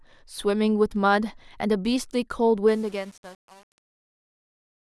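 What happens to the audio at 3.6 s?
At 3.6 s the sound is inside a fade-out that suffers truncation distortion on a fade, running from 2.68 s to 4.93 s. The fade stage drops low bits without dither, consistent with about 7-bit resolution, so the shrinking waveform collapses into coarse square steps. It sounds gritty. A waveform view shows staircase blocks, and a spectrogram shows broadband hash and harmonic smear.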